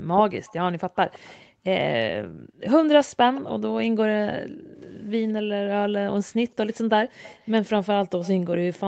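From 0.0 to 2.6 s the background is gated by the echo canceller. While the far end's loudspeaker plays, the canceller pulls the microphone down hard, and the room sound dips or vanishes for around 0.7 s in all, by up to about 24 dB. On a waveform the noise floor shows sudden notches. On a spectrogram the faint broadband background goes blank in short blocks, then snaps back when the canceller releases.

Overlapping this, from 0.46 to 1.4 s, a faint delayed copy of the speech trails the original by 164 ms at roughly 25 dB down. This is likely an echo leak: the far end's canceller missed part of what its microphone heard and sent it back. On a spectrogram it appears as weak harmonic traces shifted right of the main ones.

The same trailing copy returns briefly from 3.35 to 3.41 s, again 164 ms late but louder, about 20 dB below the speech. It shows as a short smudge after the real syllable.

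From 4.46 to 6.3 s the gating is deeper, with drops of about 39 dB across roughly 0.7 s in total. The spectrogram shows near-black gaps where the background should be, and the waveform shows abrupt flat stretches.

From 6.74 s to the end the delayed copy comes back, now 174 ms behind and around 25 dB down. It is a faint shadow, visible as ghost harmonics lagging the speech within the 8 kHz band of the call path.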